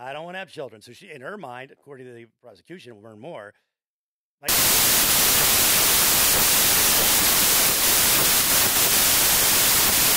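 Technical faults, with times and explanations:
4.49–10.16 s, wrong sample width: loud noise buries speech running at two-thirds speed and pitch, which fits packed 24-bit samples read as 16-bit.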